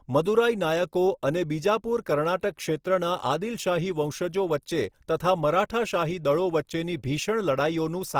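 Opus compression runs throughout this speech clip: full bandwidth reaching about 20.4 kHz, but plainly rough, grainy texture, likely from CELT-mode band filling at a low bitrate near 24 kbps.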